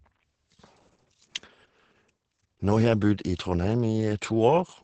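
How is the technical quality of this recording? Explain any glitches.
Quality is poor, with heavy Opus voice compression throughout. The low-rate SILK coder leaves nothing above 8.8 kHz and codes excitation coarsely, which fits about 10 kbps. Speech sounds muffled, hoarse and slightly robotic.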